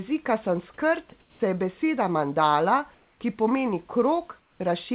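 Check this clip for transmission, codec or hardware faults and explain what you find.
Yes, there are transmission faults: one brief dropout and three stretches where the real background is swapped for synthetic noise. All of it sits on a band that stops at 4 kHz, which fits a narrowband G.711 call path.

At 1.1 s, just before "se je beseda mandala", about 20 ms of sound is lost to the voice detector. The sending side most likely judged this quiet moment to be background and stopped sending, and the receiver played filler noise in its place. The sound briefly gives way to steady noise. On a waveform there is a short flattened notch. On a spectrogram there is a thin vertical slot of smooth, textureless noise.

Comfort noise replaces the background at 1.2 to 1.4 s (again just before "se je beseda mandala"), at 2.94 to 3.2 s, and at 4.4 to 4.6 s, just after "beseda mandala ki pomeni". In these pauses the sender likely paused transmission, and the receiver generated noise shaped roughly like the room. 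The real background's grain gives way to an even hiss. It drops about 5 dB in the first gap, stays level in the second, and drops about 3 dB in the third. A spectrogram shows uniform, featureless blocks with clean edges. The waveform shows slightly lower, steadier floors in the first and third gaps.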